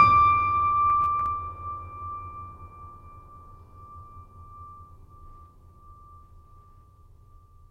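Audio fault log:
0.9–1.26 s, processor overload crackle: a short burst of gritty, tearing crackle rides over the music, built from hard-edged snippets of repeated stale audio. The processor missed around seven buffer deadlines over this stretch, each roughly 10 ms, replaying old audio instead.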